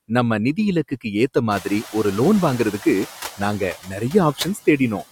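Throughout the speech, noise suppressor artifacts are audible: the background is pulled down by about 7 dB, leaving a residue that shows as blotchy, flickering patches between harmonics on a spectrogram.

At 1.5 s the room noise jumps by about 23 dB, and the noise suppressor is catching up from 1.5 to 3.07 s. Its estimate takes about 1.6 s to adapt, so the louder noise initially receives only about 4 dB of reduction. On the spectrogram this looks like a bright noise floor that fades gradually.

Between 1.6 and 1.95 s, the suppressor mistakes speech for noise. Around a tenth of a second in total is cut by up to about 15 dB, so the affected speech sounds swallowed. These drops appear as abrupt notches in the waveform envelope.

Speech is cut again between 3.59 and 4.14 s, with up to about 20 dB removed over around a fifth of a second in total. The spectrogram shows holes where speech energy vanishes.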